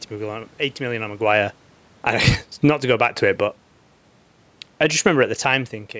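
Just after "million on", from 1.15 to 2.94 s, automatic gain falling pulls the level down by about 9 dB. Speech and room noise sink together. The waveform envelope tapers and the whole spectrogram dims evenly, noise floor included.

Overlapping this, automatic gain rising lifts the level by about 4 dB from 2.17 to 3.49 s. Voice and background swell in step, and the waveform widens gradually rather than jumping.

Automatic gain falling returns from 4.66 to 5.03 s, cutting about 5 dB in under half a second. It shows as a quick, uniform darkening across every frequency band.

Automatic gain rising follows from 4.94 to 5.62 s. The input drops by about 16 dB as the talker moves away near 5.5 s, and the control adds about 4 dB to compensate. The background noise rises along with the voice, brightening the spectrogram's floor as the speech itself fades.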